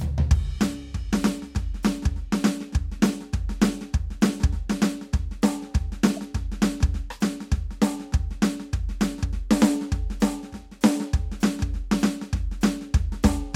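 Corrupt frame decoded at 2.99 s and 6.17 s: damaged compressed frames, a few each, were played anyway, putting stray energy in the music as brief blips, the second noticeably louder.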